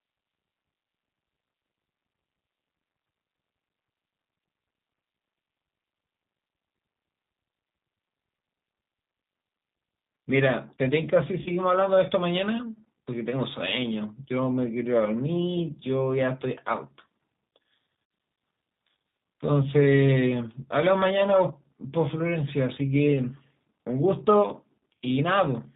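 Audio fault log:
throughout: G.729 codec. The speech is band-limited, with nothing above 4 kHz. It sounds rough and slightly synthetic, and the damage is plainly audible. The coding is at a very low rate that points to 8 kbit/s G.729A. It rebuilds each 10 ms frame from a vocal tract filter, a pitch predictor and a few pulses.
11.42–11.51 s and 18.03–18.11 s: VoIP packet loss concealed by the speech codec. About 40 ms of audio is missing at the first event and 80 ms at the second. That fits two and four 20 ms packets. The decoder repeats its last pitch and filter with falling gain, so the sound smears into a fading buzzy tone or coloured noise. Because each frame builds on the one before, the speech stays weak or distorted for tens of milliseconds or more after each gap.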